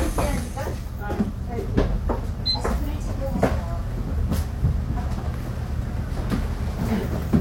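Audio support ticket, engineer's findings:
Audible jump at 2.51–2.57 s, audio jumps ahead roughly 100 ms. Decoder: compressed frames skipped, about two frames of roughly 46 ms lost.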